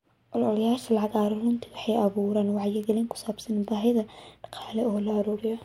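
A flipped bit in memory or on a digital link threw individual samples of this speech off by a power of two before they snapped back, a bit error spike. It happened at 0.84, 2.84, 3.65 and 4.62 s, each time as a sharp, broadband tick unrelated to the speech around it. The first two peak at about -21 dBFS, the third is quieter at about -33 dBFS, and the last, at about -27 dBFS, sounds like two corrupted samples in a row.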